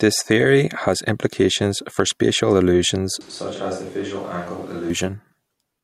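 A short speech recording whose sound turns abruptly roomy and hollow from 3.21 s to 4.90 s, most likely a switch to a distant microphone after the close one dropped out. Level falls by about 10 dB, bass thins, and background noise rises to roughly 20 dB below the speech. The waveform shows a sudden step down in amplitude with a raised noise floor between syllables. The spectrogram shows weakened low frequencies and smeared, reverberant tails, with both transitions hard-edged.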